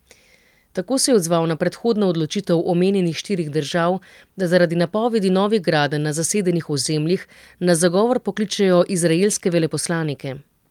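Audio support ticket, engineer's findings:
No audible faults found in the speech recording.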